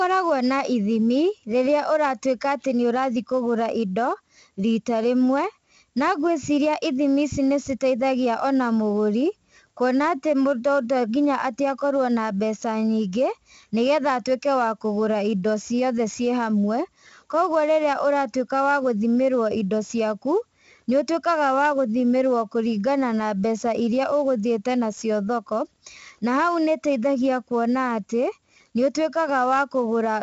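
4-bit ADPCM compression runs through the whole speech clip: each sample is coded as a coarse step from a prediction, so a level-following gritty hiss rides every loud syllable and onsets smear. A spectrogram shows broadband noise tracking the energy, and nothing above 7.8 kHz, which fits a 16 kHz rate and about 64 kbps.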